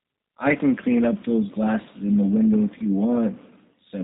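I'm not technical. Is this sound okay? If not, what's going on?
No. Throughout, the speech has passed through the G.729 codec, which rebuilds it from a simplified model. It sounds plainly rough and synthetic, with nothing above 3.8 kHz.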